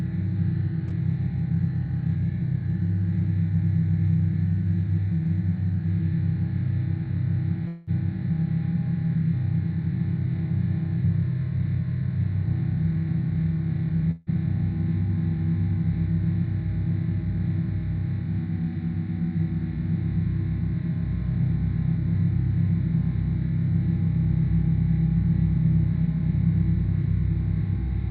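Long network dropouts at 7.67 to 7.90 s and again at 14.11 to 14.30 s interrupt the sound. Each time, a stretch of audio, about 0.2 s and then 0.16 s, likely never reached the receiver, which papered over the gap by extending the last sound into a fading buzzy smear rather than going silent. The audio then resumes further along, with that portion gone, heard through a call codec band-limited to about 12 kHz.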